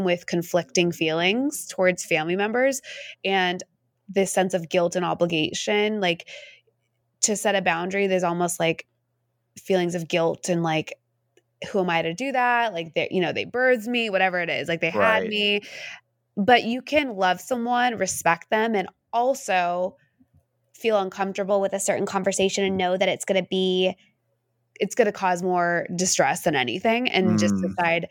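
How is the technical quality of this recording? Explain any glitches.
There is one glitch in this speech recording. From 21.50 to 24.19 s, just before "it's going to cause", the voice turns slightly higher and faster, about 1.09 times faster and raised about 1.47 semitones. This is a wrong sample rate: the samples are played faster than they were captured, with no conversion, so speed and pitch rise together. That ratio fits 44.1 kHz material played back at 48 kHz.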